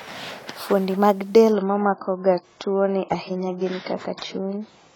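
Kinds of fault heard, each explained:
Adaptive stream at a lower bitrate: the player switched to a leaner encoding when throughput fell, so from 1.52 s to the end the speech suddenly loses everything above 7.6 kHz and gains smeared codec artefacts, with no gap, which fits a drop to around 16 kbit/s AAC.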